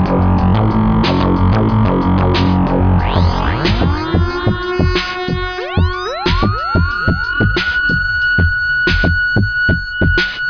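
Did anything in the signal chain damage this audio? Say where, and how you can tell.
No, nothing along the chain seems to have left a mark here; I can't point to any stage, from the wiring through to playback, where the sound has been harmed.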